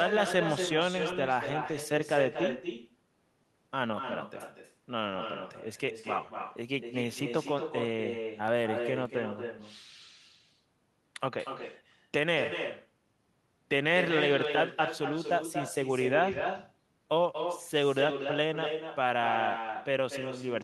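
Throughout the speech runs an echo with no canceller: the far end's loudspeaker feeds its microphone, and every phrase returns about 6 dB quieter roughly a fifth of a second later, thin. On a spectrogram, each syllable's harmonics reappear as a fainter duplicate trailing just behind.

Between 8.48 and 9.06 s come three CD scratch ticks, the player concealing data its error correction couldn't rebuild on successive disc turns. They are brief clicks, the longest about 2 milliseconds, seen as thin vertical broadband lines on the spectrogram and tiny spikes or notches in the waveform.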